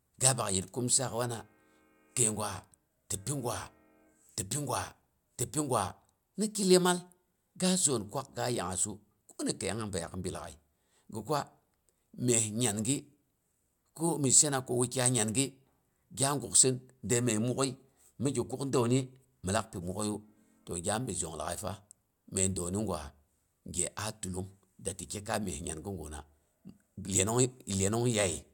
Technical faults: none

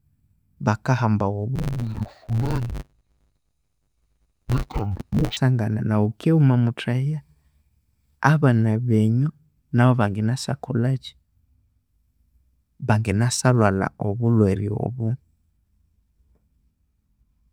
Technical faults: interleaved audio read as planar

